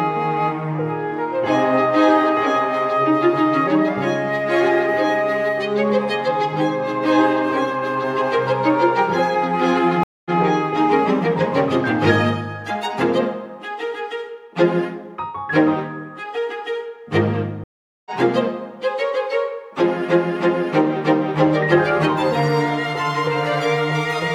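The connection dropped twice, and each time the player went quiet, reconnected and started a fresh decoder partway through the stream: a stream reconnect. At 10.03 s there is a gap of 219 ms, after which the audio picks up 139 ms earlier than where it broke off, so a short stretch repeats. At 17.64 s the silence lasts 419 ms and playback rejoins about 0.3 s later, skipping ahead. Each restart eases back in rather than resuming at full level.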